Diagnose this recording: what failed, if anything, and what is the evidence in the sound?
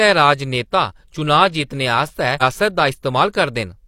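At the network and playback stage, a stream segment was likely skipped: one chunk of the segmented stream failed to arrive, and the player moved straight on to the next. In the speech, the evidence is a short blip between 2.37 and 2.43 s, after which the sound resumes somewhere further along instead of continuing smoothly. Nothing is repeated or stretched; a stretch of the programme is simply absent, with only that brief discontinuity marking the join.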